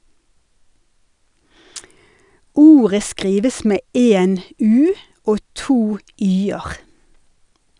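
Nothing in this recording trips up the ear, with no dropouts, clicks, glitches or other technical faults turning up anywhere along the way.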